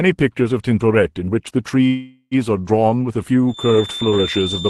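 From 1.87 to 2.34 s a call audio freeze, likely from delayed packets, stretches the last sound into a fading buzz ending in brief silence; the waveform shows a decaying smear, then speech resumes intact.

From 3.45 s to the end, a feedback whistle, likely a loudspeaker-microphone loop, adds a thin 3.6 kHz tone about 10 dB under the speech, a steady horizontal spectrogram line.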